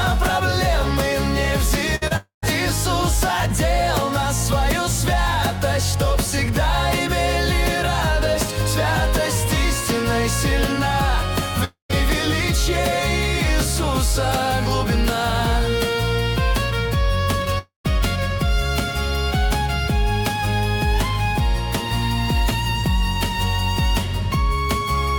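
At 1.95 to 2.03 s, a burst of packet loss leaves about 60 ms of audio that never arrives. The receiver stretches the last sound across the gap and lowers its level, so a fading buzz or hiss replaces the lost stretch before the audio picks up further on.

At 2.07 to 2.12 s comes a short concealed packet loss. About 20 ms fails to reach the decoder in time, and the receiver extrapolates the preceding sound and blends it back into real audio. The result is a quick smear or wobble.

Three longer breaks follow, at 2.16 to 2.44 s, 11.64 to 11.91 s and 17.58 to 17.86 s, each most likely a long network dropout in which roughly a quarter second of audio was lost. In each, a decaying buzz or hiss is followed by about 120 to 130 ms of silence, and the sound returns further on with the missing portion gone.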